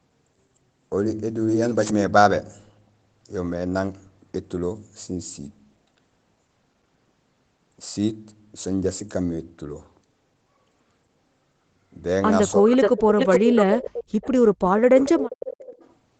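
Right around 12.61 s the speech briefly dips, about 15 dB for roughly a tenth of a second, then from 13.27 to 14.3 s and 14.54 to 15.29 s it drops out in chunks, up to about 40 dB down. That's speech suppressed in double talk, likely the echo canceller ducking everything while both ends talked. Overlapping that, an echo leak comes back about 0.43 s late at 12.71–13.02 s (roughly as loud as the speech), 13.18–14.04 s (about 5 dB under), 14.21 s (very faint), 14.99–15.11 s and 15.3–15.93 s (both about 15 dB down). Most likely the far end's loudspeaker audio wasn't fully cancelled.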